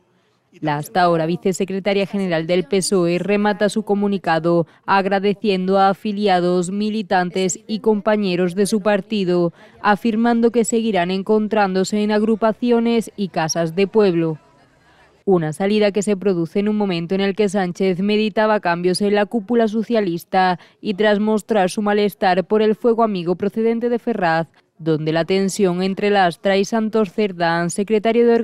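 Clock drift between sender and receiver runs throughout: the sender's clock is about 2% slow, so the receiver's jitter buffer keeps draining and falling behind. Repeated timing corrections from 0.06 s to 28.24 s repeat short pieces at uneven intervals, adding about 0.7 s, heard as small hiccups and a tempo near 98%.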